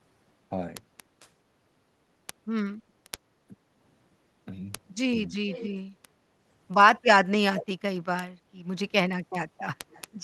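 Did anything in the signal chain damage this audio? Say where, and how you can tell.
Yes. Several stages left audible damage in this speech.

Word clock ticks (digital interface/converter): from 0.16 s to the end, single-sample ticks recur about every 0.07 s. The receiver's clock runs a few hundred ppm off the sender's.

Echo leak (call processing): delayed copies of the speech return about 0.45 s late at 1.2–1.29 s, 5.49–5.75 s, 7.56–7.66 s and 9.90–10.02 s, likely from a loudspeaker echo canceller letting residue through.

Short stall from a late packet (network/jitter buffer): at 2.80–2.91 s, the sound is held for 90 ms, then resumes where it left off. Nothing is lost, just stretched while waiting.

Speech suppressed in double talk (call processing): the level dips at 3.09–3.19 s, 3.48–3.56 s and 5.27–5.32 s, likely where the echo canceller turned down local speech during overlap.

Jitter buffer speed-up (network/jitter buffer): between 8.44 and 9.15 s the speech runs at 109% speed with unchanged pitch. 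Around 70 ms of pitch periods were trimmed to shrink buffer delay.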